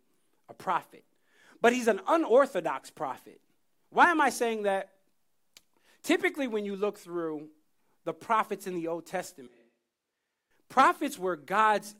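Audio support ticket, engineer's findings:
Speech goes suddenly roomy and hollow at 9.47 s, thinner low end, level down about 10 dB, room noise up to roughly 25 dB under speech. Snaps back at 10.51 s. Likely a switch to a distant microphone, close mic dropping out briefly.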